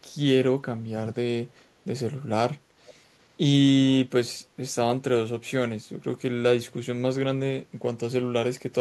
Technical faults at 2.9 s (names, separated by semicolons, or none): echo leak